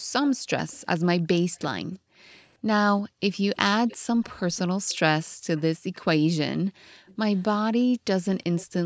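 From 0.0 to 0.13 s the room sound is pulled down by up to about 40 dB. This is background gated by the echo canceller: with the far end playing through a loudspeaker, the canceller clamps the microphone, so the ambience briefly vanishes and then returns.

From 0.27 to 1.66 s a faint delayed copy of the talker trails the speech by 344 ms, roughly 25 dB below it. This echo leak is likely caused by a loudspeaker-side canceller failing to remove everything its microphone picked up, so the residue comes back.

From 1.48 to 3.21 s the gating returns, with dips totalling about half a second and again reaching about 40 dB. The echo reappears from 2.97 to 5.96 s, now delayed by 363 ms and still about 25 dB down. A further gated dip runs from 5.32 to 5.47 s, and a longer one of about 0.4 s from 6.7 to 7.07 s.

Two shorter echo scraps at the same 363 ms delay close the clip. The first, from 7.07 to 7.42 s, is quieter, about 30 dB down. 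The second, from 8.4 to 8.73 s, is stronger at about 20 dB down. Across the clip the audio stops at 8 kHz, consistent with call microphone processing.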